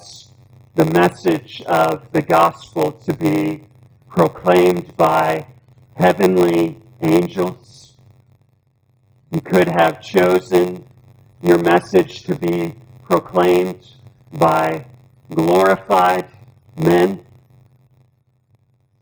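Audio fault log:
Throughout, block size mismatch (padded): one stage writes shorter blocks than the next reads, fitting a 512-sample read block, so each ends zero-filled. The gaps repeat at 93.8 Hz as a steady buzz, and the sound runs at 0.938 speed, pitch about unchanged.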